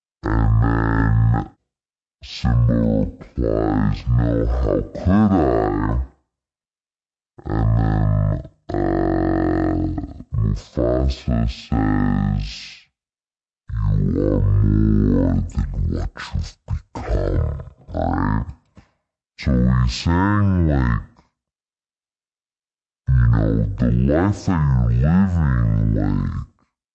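Throughout, the speech plays at half speed and a full octave (12 semitones) low, which fits 48 kHz audio played at 24 kHz with no conversion. That is a wrong sample rate. Pitch and tempo drop together, which sets it apart from time-stretching or pitch-shifting alone.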